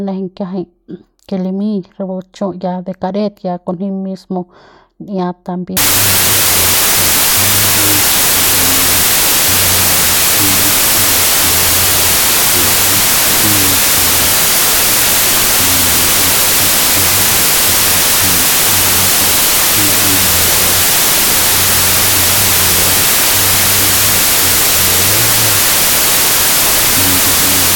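Speech that, from 5.77 s to the end, collapses into loud, harsh noise with the voice buried underneath, playing at half speed, so it drags and sits about an octave lower. This is a wrong sample width fault. The sound points to 32-bit integer samples being read as 16-bit. Each original sample is split into two values, which doubles the sample count and halves the speed. Only the halves carrying the top bits still follow the speech, and the low-order halves come out as broadband noise.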